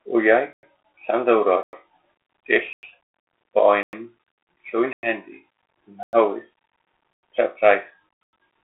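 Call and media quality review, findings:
Gap between chunks at 0.53, 1.63, 2.73, 3.83, 4.93, 6.03, 7.13 and 8.23 s: 100 ms silences every 1.1 s. Audio assembled from 1.0 s chunks with silence left at each join. Nothing lost, only interrupted. Component: chunk assembly/playback.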